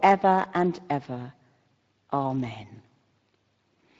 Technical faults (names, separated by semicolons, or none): Speex codec